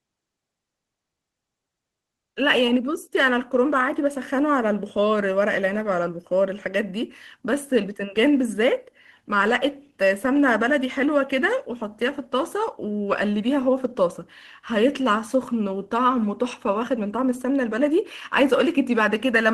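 Listening to this speech recording, which comes through a WebRTC call path, nothing stood out as a technical problem.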